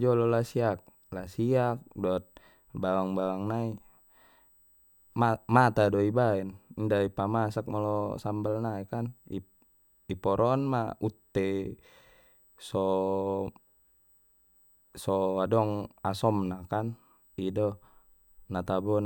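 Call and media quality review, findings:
USB whine, throughout the speech: faint fixed-pitch tone at 8 kHz, strongest at 16 kHz. The 8 kHz microframe-rate series, not mains-hum harmonics, points to USB bus current leaking via power/ground.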